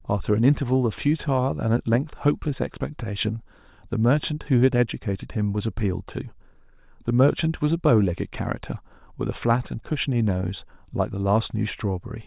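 No technical faults can be heard anywhere in it.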